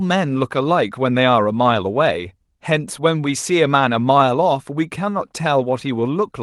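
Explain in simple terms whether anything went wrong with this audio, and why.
Nothing went wrong with this audio, and no faults can be heard in it. It passed through an Opus call connection, which trims away the very highest frequencies above 12 kHz, and that is simply how such a call normally sounds.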